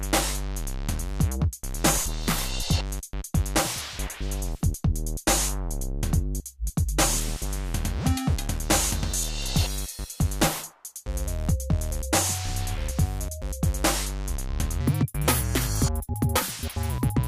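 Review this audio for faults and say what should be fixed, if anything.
From 14.81 s to the end at 17.28 s, the audio suddenly turns hurried and high, running about 1.59 times too fast, with pitch lifted by roughly seven semitones. Because speed and pitch jump together at one instant, this is a section at the wrong speed: the likely cause is that this last stretch was resampled or played against the wrong clock rate, compressing its timing and raising every frequency in the same proportion. To prevent it, confirm that every segment's sample rate matches the project rate before joining or exporting.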